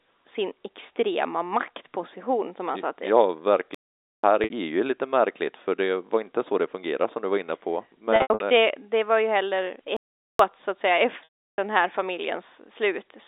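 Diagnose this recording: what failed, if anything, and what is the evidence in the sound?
Playback stalls occur at the playback stage. The speech stops dead from 3.75 to 4.23 s, about 0.49 s, then resumes. It stops again from 9.97 to 10.39 s, between "det var ju heller" and "så att säga". The likely cause is a starved output buffer or a blocked player thread.

Packet loss with pitch repetition is a network fault. At 4.44 to 4.50 s, just before "lite märkligt för det", a 60 ms gap is bridged by a briefly held, buzzy tone. From 8.16 to 8.40 s, 180 ms is lost in scattered bursts, the longest 80 ms. After "så att säga", 11.24 to 11.58 s loses 340 ms, fades to silence, then cross-fades back. All three gaps fit 20 ms packets concealed by repeating the last pitch period.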